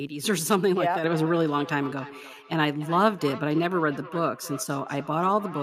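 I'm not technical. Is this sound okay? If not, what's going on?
No. From about 1.05 s to the end, the speech has a feedback echo between two devices. Two devices in the same room share the call. One plays the other's sound, which gets picked up again. Each word returns about every third of a second, fainter and more hollow.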